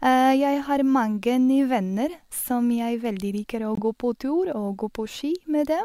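At 3.75 s a compressed frame of the speech arrived with flipped bits, the decoder rejected it as corrupt, and the player substituted silence, the fault known as a corrupt frame muted. The result is a sudden hole about 34 ms long, ending at 3.79 s, whose length points to a single lost frame. The speech cuts out abruptly and resumes on schedule, since the gap fills the missing time rather than shifting anything after it.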